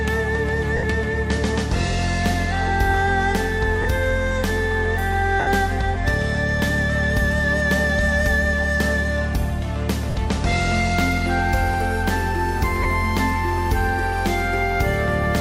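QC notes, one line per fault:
0.77–0.83, 3.82–3.85, 5.40–5.47, 10.10–10.15 and 12.83–12.85 s, lost LE Audio frames: brief dropouts of 60, 30, 70, 50 and 20 ms, fitting 10 ms frames. The LC3 decoder refills each gap with the last spectrum at random signs, so tones go briefly noisy and smeared, and the longer ones begin fading.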